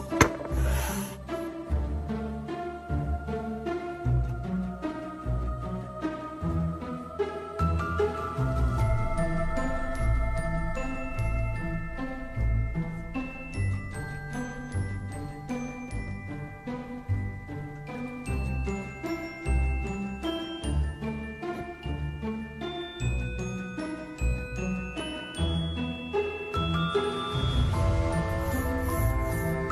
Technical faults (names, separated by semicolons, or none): none